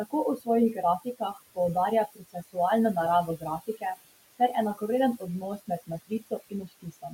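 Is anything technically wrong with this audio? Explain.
Yes, there are a few problems, all coming from the noise reduction stage.

First, overdone noise removal runs through the whole clip. The room noise underneath sits about 16 dB below the speech, and the processing was set too aggressive for it. Any frequency band that falls close to its noise estimate gets pushed way down or switched off, and the quieter parts of the speech go with it. The background drops and breaks up into little twinkling specks.

Closely tied to that are noise suppressor artifacts, also present throughout. The suppressor works frame by frame, pulling down whatever bands it judges to be steady noise, here by about 18 dB. So the background drops away between phrases and then swells back up underneath the speech whenever someone talks.

Then there's speech cut by the noise suppressor at five spots: 0.37 to 0.48 s, 0.99 to 1.38 s, 2.15 to 2.57 s, 3.27 to 3.84 s, and from 6.07 s to the end. 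The suppressor mistook bits of the speech for noise and turned them down with the background, by about 15 to 20 dB at the deepest, with the final stretch hit hardest. The first two spots lose around a tenth of a second each, the next two about 0.2 and 0.15 s, the last closer to half a second. Soft consonants and tails of words sound swallowed or faint.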